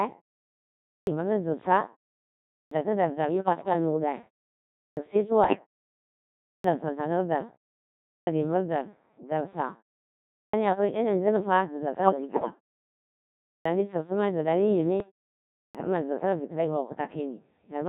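The speech comes through the Codec 2 vocoder at 1.3 kbit/s, so it sounds heavily robotic and buzzy throughout, rebuilt from pitch, voicing, energy and spectral envelope. A clipped start after a pause occurs at 0.71, 2.35, 4.59, 6.24, 7.87, 10.11, 13.24 and 15.37 s. Each time, roughly 0.36 to 0.42 s of onset is swallowed while the output device wakes. Bit errors on digital voice radio strike at 3.41 to 3.73 s, 5.44 to 5.59 s, 11.96 to 12.50 s and 15.00 to 15.13 s. Flipped bits, a few percent of them, corrupt whole vocoder frames, causing warbles, pitch jumps and garbled bleeps.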